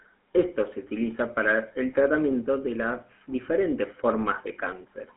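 Speech that has a buzzy, gravelly roughness throughout, in a narrow telephone band of 200 Hz to 3.5 kHz with nothing above 3.8 kHz. The sound fits the GSM full-rate codec at 13 kbps, which rebuilds speech from a vocal-tract model driven by sparse, regularly spaced pulses.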